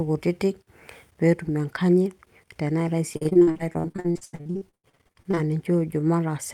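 From 3.13 s to 5.39 s the speech breaks up with repeated packet loss (robotic sound): dozens of short dropouts, the longest about 85 ms, each patched by extending the preceding sound. Nearly half that stretch is concealed, giving a choppy, robotic texture.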